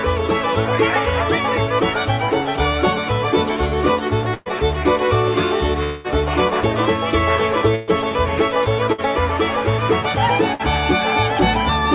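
At 4.34 to 4.49 s there's a burst of packet loss. About 120 ms of audio never arrived, and the receiver stretched the last sound into a fading buzz or hiss before jumping ahead. At 5.84 to 6.07 s the sound is held and decays for about 205 ms without dropping to silence, then resumes with roughly 210 ms gone. That's most likely a long network dropout that was bridged by concealment. The same burst-loss smear returns at 7.75 to 7.90 s (about 120 ms) and in shorter patches at 8.92 to 9.01 s and 10.54 to 10.62 s (about 60 ms each). The whole call path tops out at 4 kHz, which fits G.711 mu-law at 64 kbps.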